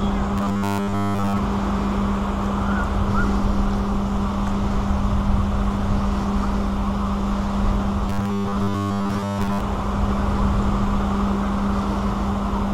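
From 0.38 to 1.39 s, and again from 8.10 to 9.63 s, the sound collapses into a rigid, metallic buzz at 100 Hz: robotic sound from repeated short buffers. The likely cause is audio arriving too seldom, so roughly 70% of the time a 10 ms slice is replayed while the real audio is skipped. Unlike a dropout or a longer stutter, nothing goes silent or audibly loops; the fixed 100 Hz pitch gives it away.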